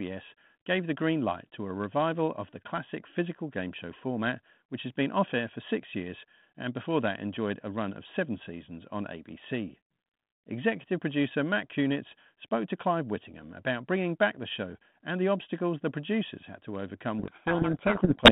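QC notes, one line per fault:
17.19–18.32 s, codec payload misread: right after "producers had to overcome", the speech is buried in harsh, rasping distortion until the clip ends. The sound points to the sender and receiver packing G.726 code words in opposite bit order, so the decoder applies wrong-sized steps to its adaptive prediction. The errors compound into noise that swamps the 150 Hz–3.6 kHz telephone band, replacing the light coding hiss expected from 32 kbit/s ADPCM.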